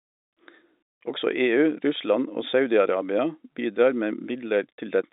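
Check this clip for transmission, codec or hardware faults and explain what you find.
I find no faults to report in this clip.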